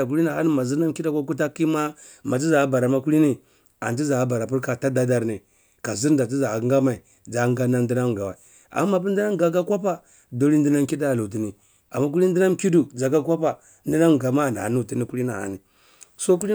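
No technical faults can be heard anywhere in the recording; the signal stays intact and continuous for its whole duration.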